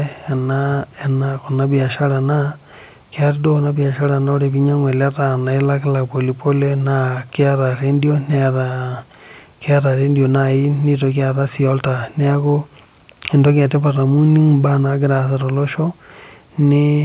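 No trouble turns up anywhere in this speech, which comes over a call connection whose sound tops out at 4 kHz, just what you'd expect from a G.711 telephone codec.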